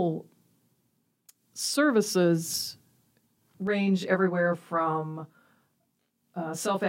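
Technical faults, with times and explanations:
3.67 s to 6.88 s, channel delay (comb filtering): from 3.67 s to the end of the clip the speech turns rough and slightly doubled. One channel is running roughly 20 ms behind the other, and when the two are summed to mono, the content they share cancels at evenly spaced frequencies. This produces a comb of fixed notches starting down near 20 Hz and repeating up the spectrum.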